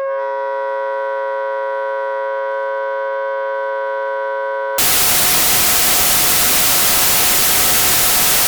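From 4.78 s to the end, the audio shows a wrong sample width fault. Packed 24-bit data are read as 32-bit integers, so most values combine bytes from neighbouring samples. Loud noise swamps the sound, which survives only faintly, running about 1.33 times too fast and high.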